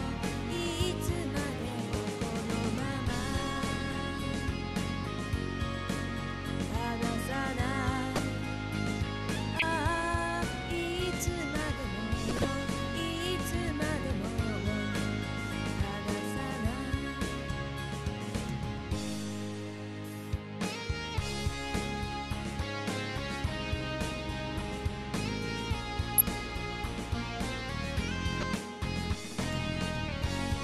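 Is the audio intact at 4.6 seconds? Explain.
Yes, at 4.6 seconds the audio plays through cleanly, with no dropout, click, distortion or other break.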